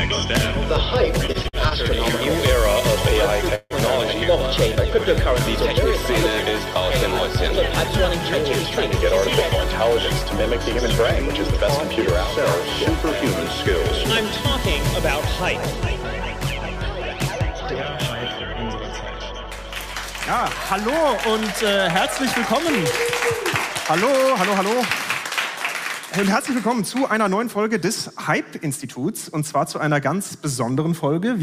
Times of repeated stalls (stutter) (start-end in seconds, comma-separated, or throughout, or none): 1.27-1.74